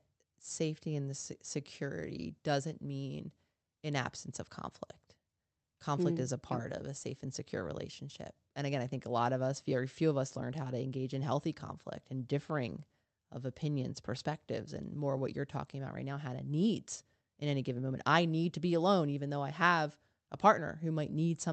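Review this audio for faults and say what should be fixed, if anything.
No faults turn up in this audio, so nothing needs to be fixed.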